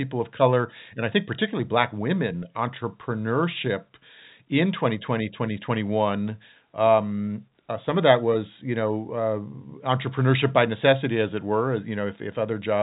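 No technical faults can be heard in this speech, so there is nothing to place in time order.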